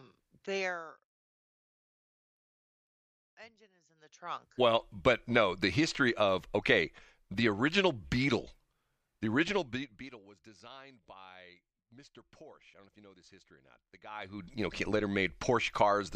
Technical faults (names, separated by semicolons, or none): none